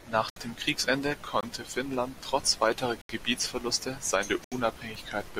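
Blocks of digital silence occur at 0.30–0.36 s, 1.41–1.43 s, 3.01–3.09 s just after "trotz weiterer", and 4.44–4.52 s, lasting 64, 21, 79 and 74 ms. Each time the output buffer likely went unfilled, so the speech drops abruptly to silence and returns. The longer gaps sound like short holes, and the 21 ms one fits a 1024-sample buffer.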